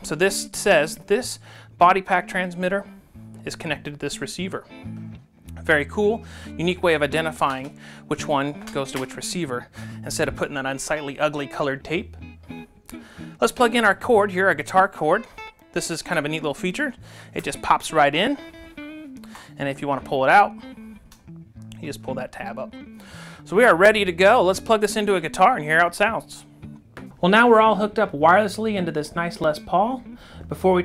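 The audio carries a regular click roughly every 2.79 s from 1.56 s to 29.44 s, about ten in all. These are likely clock drift buffer slips, a clock mismatch of around 500 ppm forcing a block of roughly 70 samples to be dropped or repeated. The strict spacing distinguishes them from random dropouts.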